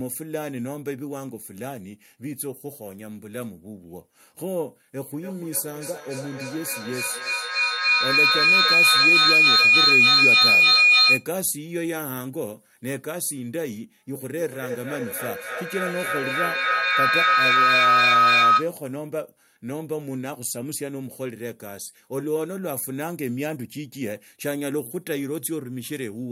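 Feedback howl at 5.12–11.32 s (near 3 kHz) and 14.15–18.75 s (near 1.5 kHz): a microphone-loudspeaker loop builds a tone pulsing every third of a second to about 12 dB over the speech, growing where echo would fade.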